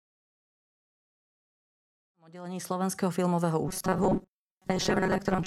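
Robotic sound from repeated short buffers runs from 3.68 s to the end of the clip at 5.47 s, after the smooth fade-in that completes by 3.14 s. The speech turns into a rigid, metallic buzz near 188 Hz that still loosely follows the syllables. The likely cause is audio arriving too seldom, so the software loops a fragment of about 5.3 ms in place of roughly half the real signal, and that fixed loop length imposes the steady pitch.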